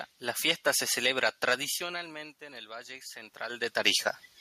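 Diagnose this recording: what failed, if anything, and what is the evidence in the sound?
Automatic gain rising from 1.77 to 3.75 s in call processing: the input drops about 20 dB, and the AGC responds by slowly raising gain about 6 dB, swelling voice and room noise together.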